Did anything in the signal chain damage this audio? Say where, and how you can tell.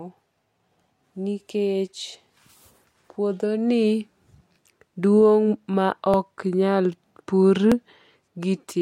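Yes. Regular clicks recur every 1.58 s from 1.40 to 7.72 s. These are clock drift buffer slips, likely two device clocks drifting, so the buffer drops or repeats small sample blocks.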